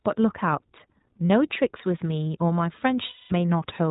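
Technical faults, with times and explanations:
Throughout, iLBC codec: the speech passes through a narrowband coder at about 15.2 kbps in 20 ms frames, so nothing above 4 kHz survives and the voice sounds clear but slightly rough and synthetic. A spectrogram shows a hard ceiling at 4 kHz with empty space above.
1.28–1.30 s and 3.06–3.33 s, lost iLBC frames: packets went missing and the decoder filled the gaps by repeating the last pitch cycle blended with noise. The short 40 ms gap is a brief, slightly buzzy or breathy held sound. The longer 240 ms gap becomes a held, slightly buzzy or breathy vowel that fades. The waveform shows repeating periodic cycles with shrinking amplitude. Because each frame decodes on its own, the speech recovers almost immediately after each gap.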